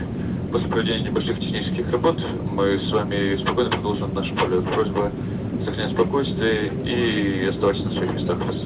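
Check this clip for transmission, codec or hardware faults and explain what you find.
No faults found; the audio has passed through a G.711 A-law call path at 64 kbps, which leaves nothing above 4 kHz, as that narrowband codec should.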